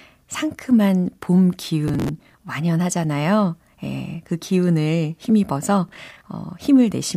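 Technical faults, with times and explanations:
1.88–2.38 s and 5.89–6.21 s, processor overload crackle: just after "상큼한 봄" and again after "예 그 기운을 힘입어서", a gritty tearing rides on the speech. Runs of roughly 10 ms buffers miss their deadlines and each replays stale audio with hard edges, so the clicks fuse into crackle.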